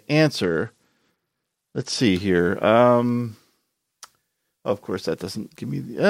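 A Bluetooth SBC bit pool drop runs from 0.43 to 2.0 s. The link appears to have come under pressure, and the sending device cut the SBC bit pool sharply, which fits a fall from around 31 to about 11, or roughly 83 kbps. Starved of bits, the highest sub-bands lose their allocation and the remaining bands are quantised coarsely, so the speech turns dull and loses its top end while a gritty, grainy noise rides underneath until the rate recovers at 2.0 s.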